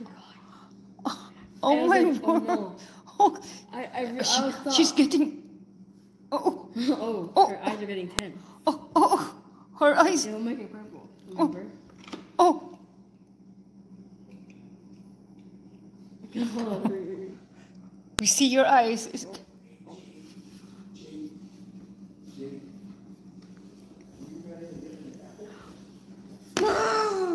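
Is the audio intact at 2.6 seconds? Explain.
Yes, the audio is intact at 2.6 seconds, with no dropout, click, distortion or other fault at that moment.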